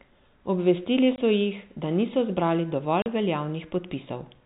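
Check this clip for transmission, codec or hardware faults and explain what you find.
Two dropouts from packet loss filled with silence, heard over a narrow G.711 telephone band. At 1.16 to 1.18 s, just before "so jih da niso", one 20 ms packet vanished. After "jih da niso zbrali", 3.02 to 3.06 s loses two packets, 40 ms. The receiver substituted silence, so each hole has abrupt edges.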